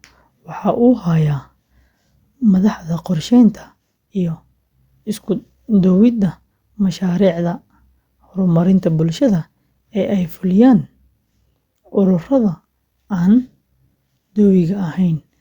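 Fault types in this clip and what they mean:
No technical faults can be heard in this speech recording. There is nothing to list for it.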